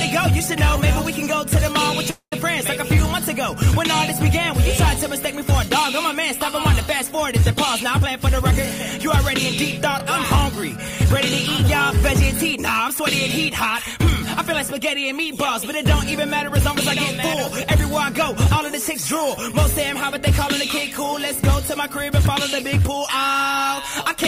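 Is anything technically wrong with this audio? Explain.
Yes, there are two faults.

From 2.10 to 2.33 s there is a call audio freeze, likely caused by delayed packets draining the jitter buffer. The receiver stretches the last sound into a fading buzz or hiss ending in about 80 ms of silence, then resumes where it stopped. Nothing is lost, but a 215 ms gap is inserted.

From 7.97 to 17.76 s a jitter buffer speed-up trims accumulated delay by cutting many short pitch-period slices, roughly a fifth of a second in total. The audio plays at about 102% speed with its pitch unchanged.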